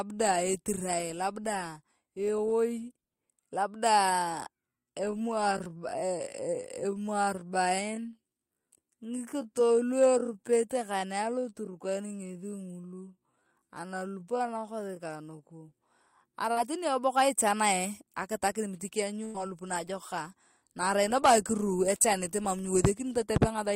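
Speech, with three faults. From 4.75 to 15.65 s there is a time-stretched section: the pace drops abruptly to about 0.63 times normal while pitch holds steady, likely from software stretching audio to fit a length rather than slowed playback, which would deepen the pitch. At 16.53 to 16.58 s, just before "teni eboka ichanae akitare", short concealed packet loss leaves a brief 40 ms smear, too short to hold or fade like a burst. At 19.24 to 19.36 s, between "miti kianyu" and "ngalup naajokak na arain", a burst of packet loss fills about 100 ms with the last sound continued and fading away, and the audio then resumes further on with that stretch missing.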